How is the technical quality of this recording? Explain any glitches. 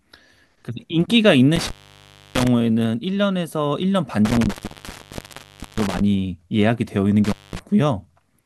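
The recording has a connection fault. Intermittent contact breaks the speech at 1.56–2.47 s, 4.25–6.01 s and 7.24–7.59 s, as a loose cable or plug briefly opens the line. Each dropout crackles at its edges and leaves faint hiss for about 0.65 s, 1.25 s and 0.21 s.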